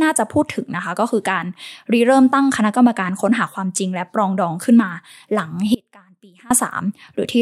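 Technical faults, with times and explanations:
5.75–6.51 s, audio dropout to a faint residue: the speech cuts out abruptly for about 0.76 s, leaving only a faint sound roughly 25 dB below normal level before returning mid-flow. This is likely a brief loss of the wanted signal while the downstream path stayed live.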